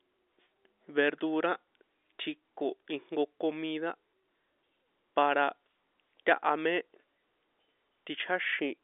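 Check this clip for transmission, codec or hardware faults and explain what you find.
No transmission, codec or hardware faults can be heard in the speech. It is carried over ordinary G.711 telephone coding, which confines it to the telephone band of roughly 300 Hz to 3.6 kHz with nothing above about 3.8 kHz, and any quantisation noise from the coding stays faint at most.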